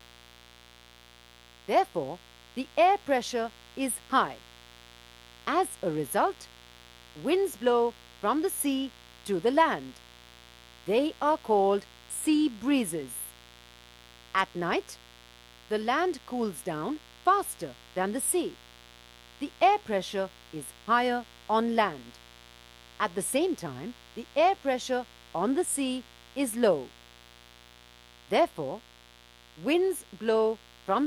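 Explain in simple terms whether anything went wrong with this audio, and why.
A steady mains buzz runs underneath the sound from start to finish. It is a raspy hum based on 60 Hz power, caused by electrical interference, such as from a dimmer or poor shielding, leaking into the recording twice every power cycle.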